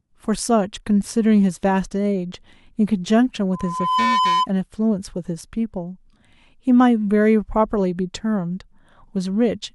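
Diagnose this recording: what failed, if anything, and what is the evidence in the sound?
Loudspeaker feedback squeal from 3.53 to 4.47 s. A steady 1 kHz tone appears under the speech and swells over about half a second until it sits at roughly the same level as the speech, then stops. The failure is in the analogue reinforcement path: the microphone is picking up the loudspeaker it drives, and at 1 kHz the loop gain rose above one, so that frequency kept reinforcing itself until the loop was broken.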